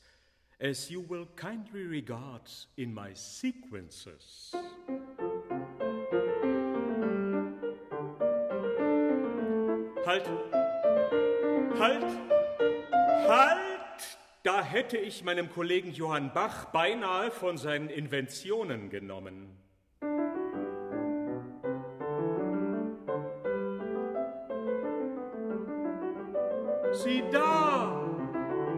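No technical faults can be heard anywhere in the recording, and the signal stays intact throughout.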